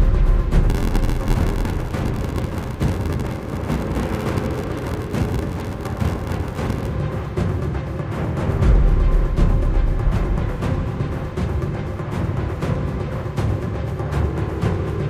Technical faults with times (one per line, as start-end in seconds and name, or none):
0.69-6.88 block size mismatch (padded)